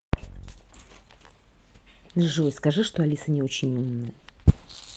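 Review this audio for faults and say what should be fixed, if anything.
Nothing needs fixing: the speech signal shows no technical faults anywhere in the recording.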